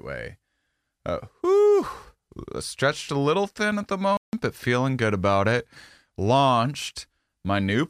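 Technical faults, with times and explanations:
4.17–4.33 s playback stall: the speech falls silent for 160 ms after "little thin at the", then continues with "but feeling good about". The player likely ran out of data or was blocked. Unlike a dropout's crackle or click, this is a clean, complete pause mid-flow.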